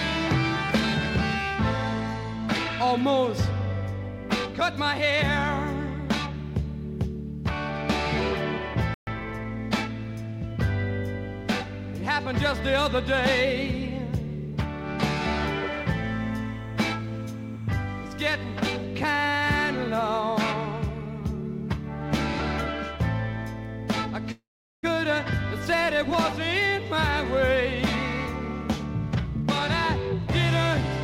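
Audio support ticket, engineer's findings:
Audio drops out at 8.94 s for about 130 ms, then resumes mid-flow. This is a playback stall, likely from a starved player buffer or a blocked output thread.

Hurried audio runs from 9.07 to 9.93 s at 1.15x speed, at normal pitch. This is time-compressed catch-up: the player cuts and cross-fades small pieces to clear the backlog left by the stall.

A steady chirping warble sits behind the sound from 15.02 to 18.84 s. It alternates near 1 and 2 kHz, about 30 dB down. This is timecode bleed: 29.97 fps linear timecode is leaking in from an adjacent track or cable.

At 24.32 s the last sound is held as a fading buzz or hiss, then about 400 ms of silence follows. The audio resumes where it stopped at 24.85 s, with nothing lost. The result is a roughly 514 ms gap. This is a call audio freeze, likely the jitter buffer running empty while packets were delayed.

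Audio runs at 121% speed with unchanged pitch from 29.15 to 29.48 s, and it sounds rushed. This is a jitter buffer speed-up: the receiver removed about 70 ms in short pitch-period slices to trim excess delay.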